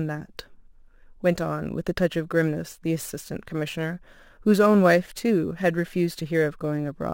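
Imaging from sample-and-hold upsampling runs throughout. Each sample was repeated rather than smoothed, which fits a 24 kHz original raised to 44.1 kHz. A mirrored spectrum copy fills 12 to 24 kHz about 26 dB down, heard as metallic fizz tracking the speech.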